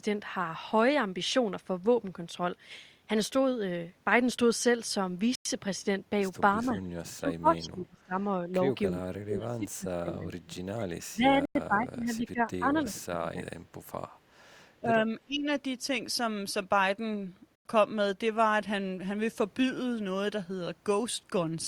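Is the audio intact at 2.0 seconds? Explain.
Yes, at 2.0 seconds the speech plays through intact, with no dropout, click or other audible fault at that point.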